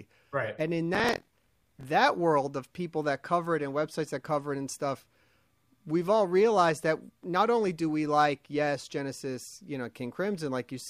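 Buffer tearing runs from 0.93 to 1.85 s, just before "world of people that". The writer and the reader of a ring buffer cross mid-period, so a small slice of each buffer replays audio from one lap earlier. The result is a rattling 43.1 Hz buzz over the speech, which fits a 1024-sample buffer.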